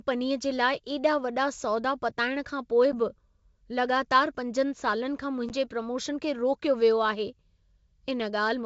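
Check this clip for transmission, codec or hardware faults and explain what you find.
Two short dropouts break the speech, at 2.92 to 2.95 s and again at 5.49 to 5.51 s. Each is a hard-edged gap of silence about 10 ms long, followed by a brief stretch of slightly distorted speech before it settles. Both are packet loss on an ADPCM call, here over G.722 wideband coding, which sounds clean and consistent with its 64 kbit/s mode. In each case what went missing fits roughly a single packet, and the decoder filled the hole with silence. Because ADPCM codes each sample as a difference from a prediction, with a step size that adapts as it goes, the receiving decoder's predictor and step size no longer matched the sender's once the packet was skipped. That mismatch causes the slight distortion right after each gap, which clears within some tens of milliseconds as the two sides drift back into agreement.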